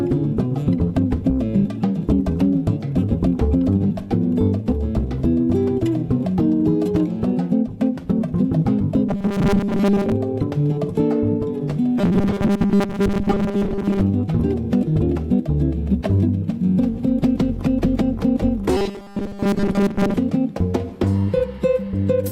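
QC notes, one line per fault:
9.09–10.12 s, 11.98–14.01 s and 18.77–20.17 s: robotic sound from repeated short buffers. A rigid, metallic buzz locked at 200 Hz replaces most of the sound, likely because roughly 5 ms chunks are replayed when new audio arrives late. Unlike dropouts, nothing goes silent; the fixed pitch gives it away.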